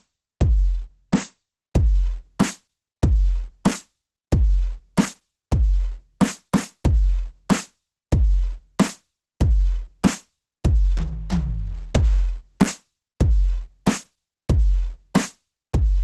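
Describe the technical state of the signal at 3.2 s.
At 3.2 s the music carries Opus compression, present from start to end. Nothing sounds above about 12.1 kHz. The tone is muffled, hoarse and grainy. This points to a very low bitrate, near 12 kbps, likely forcing the encoder into its hybrid speech mode.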